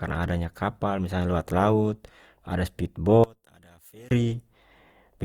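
From the start the speech has a swirly, hollow, smeared quality, with softened consonant attacks, which points to generation loss, likely from about four passes through a lossy codec consistent with Opus at 48 kbit/s. A spectrogram shows speckled noise below a ceiling near 20.3 kHz.

From 3.24 to 4.11 s the level falls by about 28 dB, leaving a faint residue, consistent with one channel inverted and the centred content cancelling in the mono sum. The waveform collapses to a narrow band there, and the spectrogram fades almost entirely.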